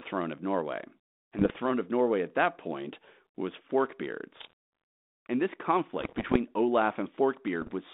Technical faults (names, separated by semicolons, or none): bit errors on an ADPCM link